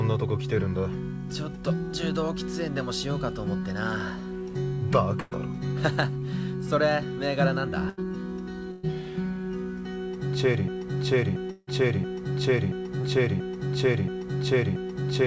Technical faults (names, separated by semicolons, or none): burst of packet loss; broken-record loop; long network dropout; short concealed packet loss